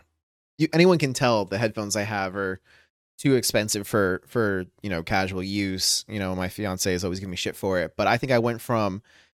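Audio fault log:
No fault can be heard anywhere in this speech clip. Nothing in it calls for a timed entry.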